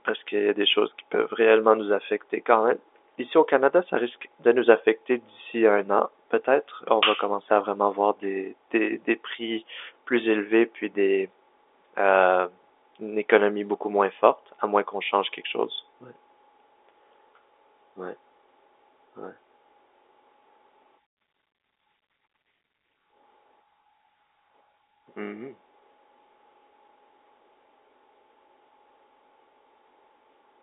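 There are no technical faults in this speech, which arrives over a telephone line carrying nothing above 3.8 kHz.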